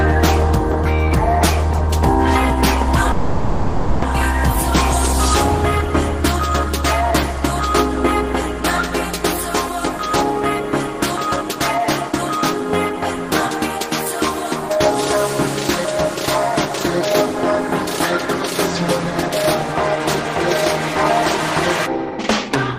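A call audio freeze at 3.11 to 4.04 s stretches the last sound into a fading buzz for about 0.91 s, likely from delayed packets draining the jitter buffer; nothing is lost. Jitter buffer speed-up follows at 9.99 to 13.31 s and 16.15 to 18.56 s, running about 104% by trimming pitch-period slices, then at 21.87 to 22.79 s, much faster at about 129%. The last one sounds hurried at the same pitch.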